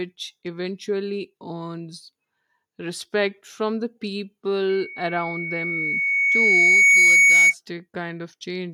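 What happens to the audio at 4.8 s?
At 4.8 s a loudspeaker feedback squeal is building. It starts at 4.69 s and lasts until 7.54 s: a single tone at 2.2 kHz that swells over roughly two seconds until it sits around 15 dB above the speech. The microphone is picking up the loudspeaker it feeds, and at that frequency the loop gain exceeds one, so the tone feeds itself. That self-growing swell at one pitch is what separates it from a steady interfering whine, which holds a constant level.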